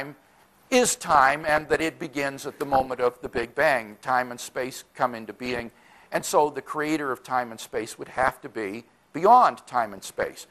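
Throughout, the audio sounds dull and gurgling, likely from MP2 compression at a low bitrate that fits about 80 kbps. Starved sub-bands drop out, so a spectrogram shows upper bands flickering on and off.

At 0.85–1.85 s, 2.70–3.61 s, 5.44–6.27 s, 7.64–8.40 s and 9.98–10.30 s comes DAB burbling. Reception bit errors slip past error correction into the MP2 data as short blips of noise in single sub-bands, showing as isolated narrow-band blocks.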